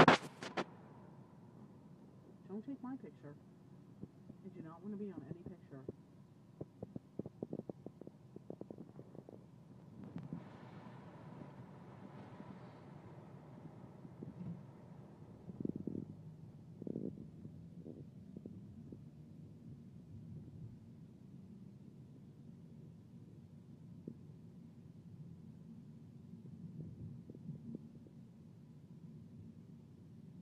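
No technical faults can be heard in the clip. There is nothing in it that needs a time mark.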